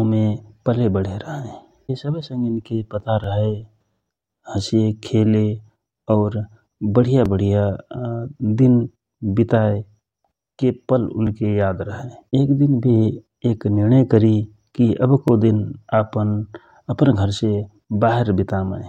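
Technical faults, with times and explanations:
3.24, 7.26, 11.27 (just after "वितायके पल") and 15.28 s: overlapping chunks. The speech was processed in 4.0 s blocks, and each block begins about 13 ms before the previous one ended, so that sliver plays twice at every join and produces a brief click or stutter every 4 seconds. On a waveform, each join shows a small discontinuity where a 13 ms segment repeats. On a spectrogram, vertical broadband lines appear at these regularly spaced points.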